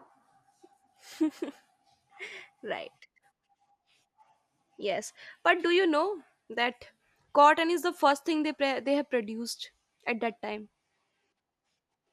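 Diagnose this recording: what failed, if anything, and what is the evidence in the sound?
Codec stage, DAB burbling at 8.11 s: a brief burst of noise blips rather than a silent dropout, as bit errors corrupt MP2 audio data and spike single sub-bands.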